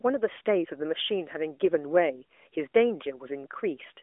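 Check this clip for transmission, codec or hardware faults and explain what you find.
No transmission, codec or hardware faults can be heard in the speech. It comes through an AMR narrowband mobile codec path, with the sound confined to a telephone band of roughly 300 Hz to 3.5 kHz, nothing above about 3.7 kHz, and only light coding colour, which fits the codec's top 12.2 kbps mode.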